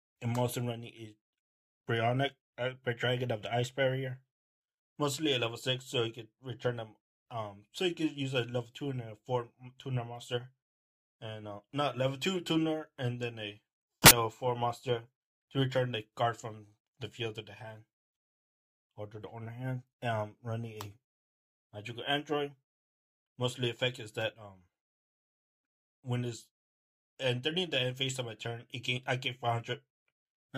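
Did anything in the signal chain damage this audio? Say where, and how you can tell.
Yes: at the sample-format conversion stage, the reader assembled each sample from the wrong bytes between 14.02 and 14.11 s. The fast-changing low bits became the dominant part of each value, so that 86 ms burst is heard as loud, harsh broadband noise.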